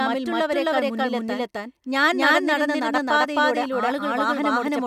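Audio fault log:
throughout doubled audio track: every syllable repeats about 300 ms later as an equally loud, dry, full-band copy, likely from the speech being captured twice out of step.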